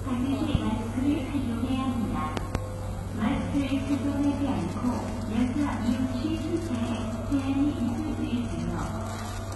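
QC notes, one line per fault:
throughout: HE-AAC compression, likely, heavy, at a low bitrate around 16 kbps. Nothing remains above about 11.8 kHz, and the upper band is rebuilt from copied lower bands, so the treble sounds gritty and metallic and its harmonics don't line up. That is unlike plain low-pass dulling, which loses brightness instead.
0.55 s: loud pop, a single sharp impulse about 20 dB above the sound, with the audio carrying on beneath it. This is likely a voltage step from a plug, switch or static discharge. It is a brief transient added on top, not a dropout or a gap in the signal.
2.37–2.58 s: loud pop, two pops in quick succession about 20 dB above the sound, likely from the same kind of electrical step and its ringing. The sound continues underneath, which separates it from a click caused by a buffer or sync break.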